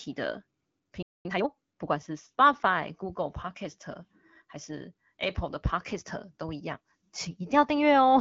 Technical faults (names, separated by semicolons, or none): playback stall; time-compressed catch-up